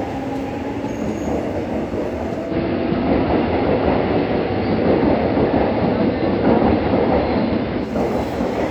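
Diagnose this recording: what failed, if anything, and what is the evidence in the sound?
The failure is at the receiver: a digital radio blending to analogue. At 2.44 s the sound cross-fades over about 126 ms into the station's AM feed. The level shifts by about 4 dB, and hiss rises to roughly 30 dB below the signal. At 7.91 s it blends back to the digital signal. A codec low-pass would not do this: it adds no hiss or level step and does not switch cleanly in and out.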